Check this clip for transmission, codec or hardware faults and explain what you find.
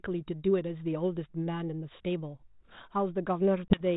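One transmission fault is present, near the end of the speech. From 3.68 to 3.82 s, a sharp 20 ms hole of silence is followed by brief distortion that settles within tens of milliseconds. This is packet loss on an ADPCM call, about one packet dropped. The G.726 decoder's adaptive predictor and step size drifted from the sender's and had to re-converge on the 32 kbit/s stream.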